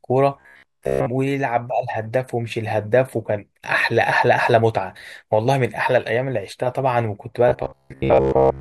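Audio likely arrived too seldom from 0.40 to 1.08 s and again from 7.48 s to the end, so short buffers of about 15 ms were replayed for about 70% of those spans. This robotic sound from repeated short buffers imposes a rigid, metallic 66.8 Hz buzz.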